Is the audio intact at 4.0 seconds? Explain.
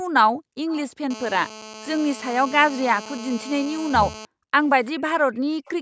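No. At 4.0 seconds two things are going on at once. The first is GSM phone buzz, running from about 1.11 to 4.25 s. A 2G handset nearby is transmitting in bursts at roughly 217 per second, and the audio circuitry rectifies those radio pulses into sound. You get a hard, raspy buzz at 217 Hz, full of harmonics, sitting about 15 dB under the speech. It holds steady the whole time, which fits a phone on an active call.

Overlapping it, from 3.73 to 4.13 s, the speech drops out sharply, falling by something like 40 dB at its deepest and staying down for about 0.4 s. That's likely speech suppressed in double talk. Both ends were talking together, the echo canceller couldn't tell the near talker apart from the loudspeaker echo, and it clamped down on everything. So right at 4.0 s the voice is being suppressed while the buzz carries on underneath.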